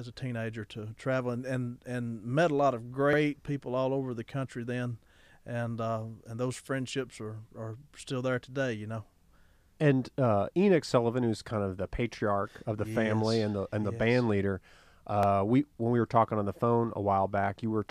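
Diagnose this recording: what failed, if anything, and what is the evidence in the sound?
Overlapping chunks at the buffer or block-processing stage: 50 ms of speech repeats at 3.13 s (between "met a lot of" and "people all over the"), 9.18 s (before "and uh") and 15.23 s (before "we when we were"), every 6 s. Each new block begins 50 ms early. A waveform shows duplicated segments with a step at each join, and a spectrogram shows a vertical click line there.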